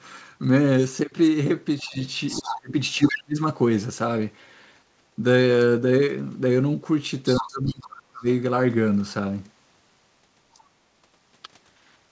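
Speech suppressed in double talk first appears at 1.83 to 1.97 s, a brief dip of about 15 dB. Deeper cuts follow at 2.39 to 2.76 s (about 30 dB), 2.97 to 3.38 s (about 35 dB) and 7.38 to 8.27 s (about 30 dB, nearly a second). The likely cause is an echo canceller that could not tell the talker from the loudspeaker echo while both were active, so it pulled both down. The talker sinks or breaks into fragments. In the waveform the envelope collapses in these spans. In the spectrogram the harmonics fade or vanish in vertical gaps.

Other side's voice leaking through overlaps those cuts. Scraps of a second voice sit about 10 dB under the talker at 2.27 to 2.54 s, 3.03 to 3.16 s and 7.25 to 7.47 s. A much fainter trace, about 35 dB down, appears at 10.54 to 10.60 s. This is likely residual loudspeaker sound that the echo canceller failed to remove. On a spectrogram it shows as a second, weaker harmonic stack interleaved with the main one. 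Everything stops at 8 kHz, which fits a 64 kbps G.722 call path.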